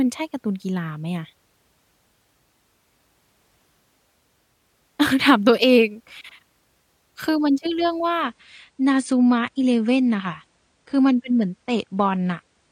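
From 8.23 s to the end, an adaptive stream at a lower bitrate: a slowed connection switched playback to a leaner version, abruptly cutting treble above 9.7 kHz, seamlessly, unlike a dropout.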